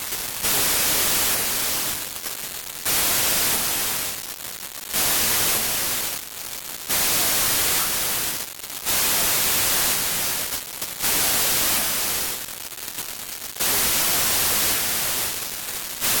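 A wrong sample width, consistent with 32-bit data read as packed 24-bit, buries the sound under loud noise throughout and slows it to 0.75 speed, lowering pitch.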